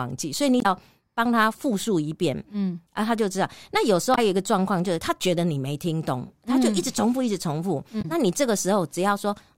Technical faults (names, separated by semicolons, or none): damaged data in a compressed stream